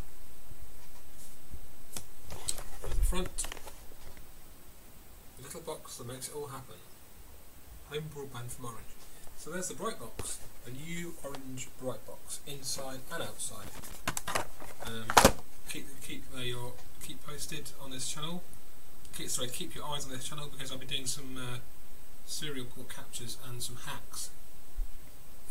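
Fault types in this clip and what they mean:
Loose connector crackle: a worn or dirty contact in the signal path kept making and breaking as it shifted, chopping the audio rapidly on and off. Here that comes through as an irregular burst of crackle and scratching from 13.62 to 13.95 s.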